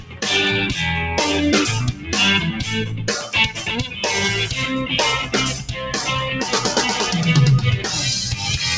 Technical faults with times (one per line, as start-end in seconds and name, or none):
0.00-8.77 noise suppressor applied to music or sounds
0.00-0.22 sound cut by the noise suppressor
1.93-2.10 sound cut by the noise suppressor
2.91-3.06 sound cut by the noise suppressor
5.59-5.79 sound cut by the noise suppressor